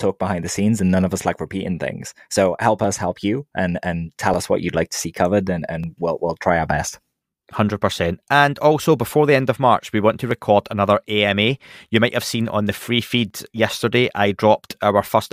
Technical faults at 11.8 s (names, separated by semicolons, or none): clock drift buffer slips